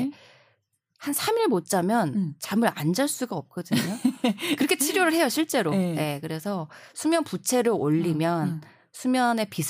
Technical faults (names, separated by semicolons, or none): none